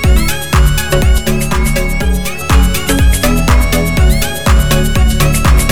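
From 1.18 to 2.41 s, channel delay (comb filtering): one side lags about 5 ms, cancelling at about 100 Hz upward, giving hollow sound and evenly spaced dark horizontal stripes on a spectrogram.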